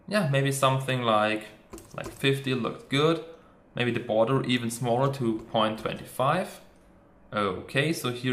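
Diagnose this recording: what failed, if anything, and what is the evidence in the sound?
Nothing in this recording points to a failure at any stage of the chain. No audible event stands out to tie to a time, so there is nothing here to diagnose.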